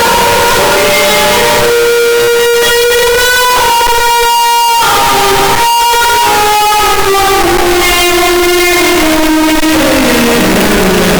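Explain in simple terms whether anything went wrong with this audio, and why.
The whole clip, from start to end, is blasting loud and harsh, with the background noise pushed up as loud as everything else. That's float read as integer: 32-bit floating-point samples were likely read as 32-bit whole numbers, squashing the waveform into a near-square shape.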